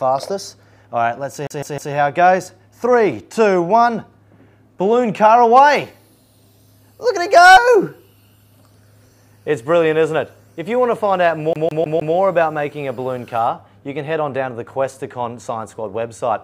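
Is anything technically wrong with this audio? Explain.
Yes, there's a CD stuck on one turn, and it happens twice: from 1.47 to 1.94 s, where a 155 ms slice repeats three times, and from 11.53 to 12.15 s, where the same 155 ms length repeats four times. A scratch keeps knocking the laser back a track on each revolution, so the player replays that same short stretch, with a brief dropout at every jump. You hear the quick, evenly spaced stutter of a skipping CD.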